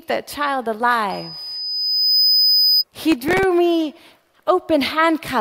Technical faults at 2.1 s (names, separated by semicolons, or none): loudspeaker feedback squeal